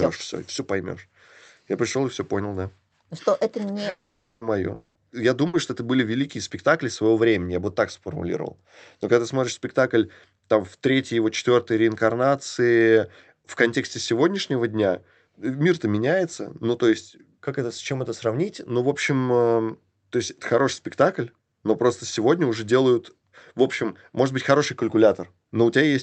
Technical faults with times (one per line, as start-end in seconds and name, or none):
3.89-4.43 long network dropout
4.75-4.97 long network dropout
5.47-5.55 burst of packet loss